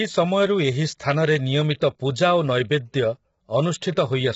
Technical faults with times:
0.00-4.36 low-delay AAC compression
3.92-3.96 pre-echo

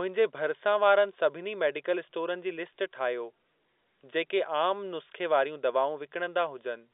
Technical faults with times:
none

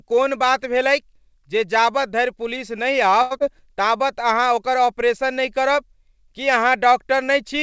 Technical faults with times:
3.22-3.33 short stall from a late packet
3.39-3.42 short concealed packet loss

